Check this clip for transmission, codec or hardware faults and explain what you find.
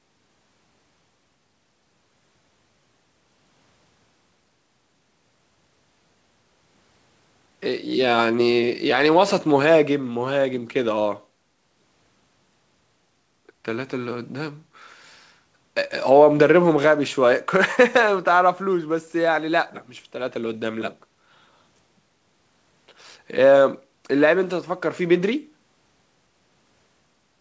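No transmission, codec or hardware faults.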